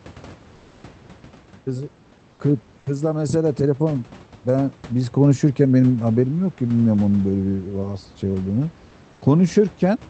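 From 0.55 to 0.83 s, and again from 9.13 to 9.21 s, comfort noise in place of the background takes over. The room's textured background turns flat and featureless, about 2 dB and then about 4 dB quieter. This is likely discontinuous transmission in the Opus call path, where the receiver synthesises noise while the sender sends almost nothing. On a spectrogram, the grainy background becomes a smooth, uniform band. On the waveform, the low noise floor drops slightly in both gaps.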